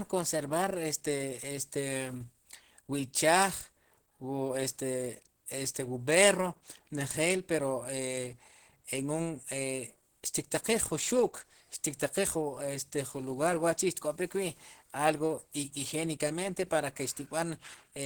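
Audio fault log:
Throughout: Opus compression, likely at about 16 kbps in hybrid mode; speech sounds hoarse, rough and grainy, because sparse bits leave bands noise-filled rather than faithfully coded.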